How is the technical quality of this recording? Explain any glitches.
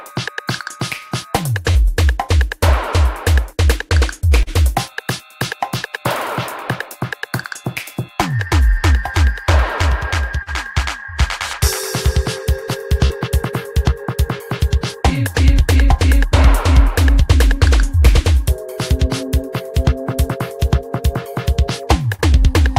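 The recording has five short dropouts, each a short concealed packet loss, at 1.71–1.78, 4.43–4.50, 10.43–10.50, 13.07–13.13 and 22.14–22.21 s. About 40 ms of audio failed to arrive each time. The decoder extrapolated from the preceding signal for roughly 35–45 ms before blending back, which is heard as a brief smear or wobble.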